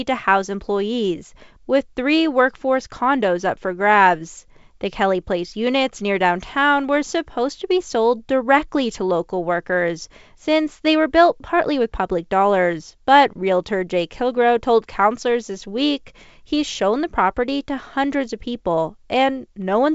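Speech over G.722 wideband coding, with no faults audible.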